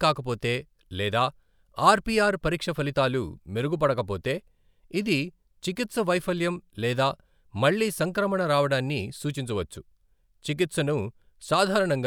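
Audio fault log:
No technical faults can be heard in the speech recording.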